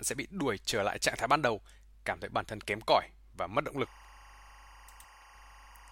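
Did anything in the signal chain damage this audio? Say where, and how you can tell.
Yes, timecode bleed enters in the analogue wiring from 3.84 s to the end, just after "cỏi và mất động". A chirping warble near 1 and 2 kHz sits roughly 25 dB under the speech. Linear timecode from an adjacent cable is coupling in, its biphase square wave clocking at what fits 23.976 frames per second.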